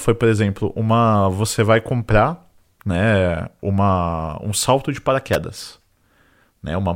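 An electrical switching spike lands at 5.33 s as a sharp snap on top of the speech, peaking at roughly -5 dBFS. It is likely a brief arc from a nearby switch, motor or static discharge that the audio line picked up.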